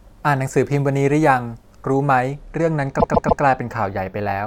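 Repeated frames, from 2.99 to 3.42 s: a 144 ms stretch of the speech plays three extra times, a stutter that lengthens the audio by 432 ms. A run of compressed frames, which fits about six frames, was written or sent more than once, so the decoder replayed it.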